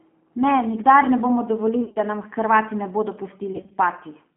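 Speech squeezed through the G.729 codec at 8 kbit/s, limited to roughly 200 Hz to 3.4 kHz, sounds noticeably rough and synthetic throughout. VoIP packet loss concealed by the speech codec stretches the speech into a buzzy tone or coloured noise that fades at 1.84 to 1.99 s, after "nikdar ne bomo" and before "da nam", and again at 3.53 to 3.75 s, after "ne bodo". About 100 ms and 110 ms go missing there, in gaps of up to 40 ms.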